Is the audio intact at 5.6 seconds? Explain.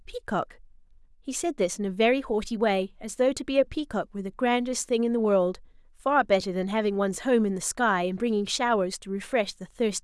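Yes, the speech at 5.6 seconds is intact, with no dropout, click, distortion or other fault at that moment.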